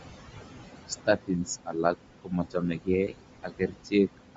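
Throughout, the background room noise, sitting about 9 dB below the speech, sinks by about 20 dB between phrases and swells back underneath them. These are noise suppressor artifacts from frame-by-frame gain on noise-like bands. The speech also has a grainy, breathy edge, with nothing above 7.8 kHz, likely from Bluetooth LC3 compression at a low bitrate, consistent with about 32 kbps in 10 ms frames. From 0.88 to 1.48 s, 1.66 to 1.96 s, 2.22 to 2.89 s and 3.43 to 4.19 s, parts of the speech sound swallowed and faint, dropping by about 20, 14, 21 and 19 dB. In these stretches the noise suppressor cut speech it mistook for noise.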